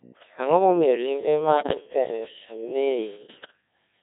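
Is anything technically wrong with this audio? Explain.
Yes. The whole clip of speech has passed through the Codec 2 vocoder, and two short stretches carry bit errors on digital voice radio.

Codec 2 vocoder, throughout: The damage is heavy. The decoder does not keep the waveform. It rebuilds the voice from sine waves driven only by pitch, voicing, energy and a spectral envelope. The thin, buzzy, robotic result fits the 1.6 kbit/s mode. Natural breathiness and detail in the voice are gone, replaced by a synthetic, metallic timbre.

Bit errors on digital voice radio, 1.57 to 1.74 s and 3.24 to 3.53 s: At such a low rate, each corrupted bit sets the pitch, level, voicing or spectrum of an entire frame. The first burst has the denser errors, on the order of a tenth of the bits. It produces abrupt pitch jumps and warbling bleeps. The longer second burst has roughly half that error rate but spans more frames. 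It breaks into unstable, gibberish-like synthetic sound with shifting level and tone colour.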